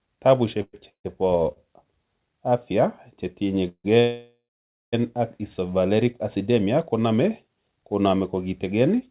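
At 0.62 to 0.75 s the speech halts and a fading buzz or hiss fills about 110 ms, ending in roughly 30 ms of silence. The same happens at 0.89 to 1.06 s: about 150 ms of fill, with about 100 ms of it silent. Each is a call audio freeze, likely from packets held up in transit. The jitter buffer ran dry and the receiver extended the last sound until audio resumed where it stopped. Nothing is lost, but each freeze inserts a gap.

At 1.52 to 1.58 s there is a short stall from a late packet. One packet missed its slot, and the last sound was stretched for about 40 ms. The result is a briefly held sound with a slight buzz or dip. The speech then carries on with nothing missing.

Two more call audio freezes follow. At 3.68 to 3.86 s about 160 ms is filled, with about 60 ms of silence. At 4.00 to 4.95 s comes the longest, about 920 ms. The buzz or hiss dies into about half a second of silence before the speech picks up again. 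Across the whole clip there is no content above 4 kHz, which points to a G.711 mu-law call path at 64 kbps.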